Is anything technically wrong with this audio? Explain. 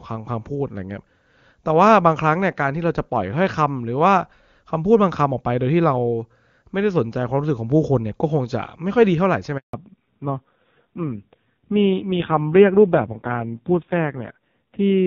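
Yes, there are two related faults in this speech clip.

From 9.57 to 9.73 s there is a handover gap. The call switched networks and no speech frames arrived for 160 ms, so the voice drops out to silence. On a waveform this is a flat line; on a spectrogram it is a clean vertical blank band.

From 9.73 s to the end there is a fallback to narrowband. The call left HD Voice for an older narrowband codec, so nothing above 4 kHz survives and the voice turns dull and somewhat rough, which fits a drop to roughly 5.9 kbit/s AMR-NB. A spectrogram shows the upper band abruptly emptied, with a hard ceiling at 4 kHz. Before the switch, the wideband coding sounds clean, consistent with a high AMR-WB rate near 23.85 kbit/s.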